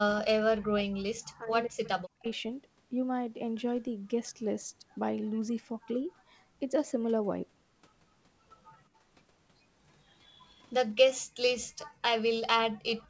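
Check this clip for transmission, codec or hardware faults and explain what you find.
Three kinds of echo-canceller fault are audible: speech suppressed in double talk at the start, three short echo leaks, and two brief dips where the background is gated. The band stops at 8 kHz, which fits a G.722 call path at 64 kbps.

Speech suppressed in double talk, 0.00 to 2.26 s: For about two seconds the speech dips and breaks up, with the deepest drop around 40 dB. This is likely double-talk suppression. With both ends active, the echo canceller could not tell the near talker from loudspeaker echo, so it attenuated everything it picked up, including the wanted speech.

Echo leak, 1.84, 6.1 and 13.0 s: Each event is a short scrap, about 40 to 50 ms long, of a delayed copy of the speech. The delays are 186, 193 and 205 ms, and each copy sits roughly 35 to 40 dB below the direct speech. The likely cause is a far end on a loudspeaker whose echo canceller left some residual echo unremoved, which was then sent back into the call.

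Background gated by the echo canceller, 8.89 to 9.01 s and 11.90 to 11.99 s: The room sound drops briefly, by about 13 dB and then about 10 dB, for roughly a tenth of a second each time, and then returns. While the loudspeaker was active, the canceller clamped the microphone gain down hard. It released once playback stopped, leaving a short hole in the ambience.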